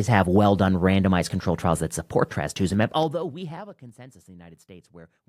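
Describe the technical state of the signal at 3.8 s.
Zipper noise runs from 2.69 to 3.90 s, so at 3.8 s the signal is near the end of a stepped fade, just after "control trials that support". The level drops by about 25 dB in 2 dB jumps at roughly ten per second, each jump applied at once rather than ramped. Each sudden gain change leaves a small click, and the string of clicks forms a ticking, zipping texture laid over the speech as it falls away.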